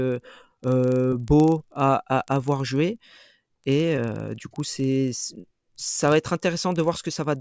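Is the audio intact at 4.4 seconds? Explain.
No. At 4.4 seconds the speech carries the resampler restarted on every block fault, which runs through the whole clip. The 48 kHz to 16 kHz conversion was restarted for each 40 ms block, so every block edge carries an error. The result is ticks at 25 Hz, heard only while signal is present.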